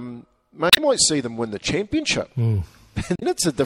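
Throughout, the speech has a watery, swirling treble and a dulled top end, likely from MP3 compression at a low bitrate, around 64 kbps. Weak frequency lines switching on and off between frames cause the swirl, which is spread across the clip rather than arriving as isolated bursts. At 0.70 to 0.79 s and again at 3.14 to 3.23 s, damaged data in a compressed stream produces short glitches. Here the decoder hits corrupted frames, loses sync and skips to the next header. These are brief, sudden breaks that stand apart from the steady compression haze.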